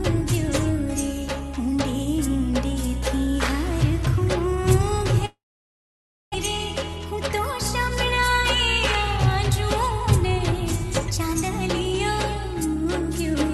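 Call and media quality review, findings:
5.25–6.36 s: sound held as a fading buzz, then near-silence; resumes with roughly 0.6 s missing. Likely long network dropout; receiver concealment bridged the gap.

12.36–13.36 s: audio hurried at 105% speed, pitch unchanged. Jitter buffer speed-up trimming pitch-period slices, about 50 ms total, to shed excess delay.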